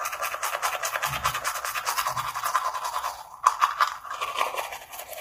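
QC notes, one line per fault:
Throughout, low-delay AAC compression: the sound is heavily rough and grainy, with noise filling the gaps between tonal components and nothing above 15.6 kHz. Unlike longer-frame codecs, short frames blur fine frequency detail, likely AAC-ELD near 24 kbps.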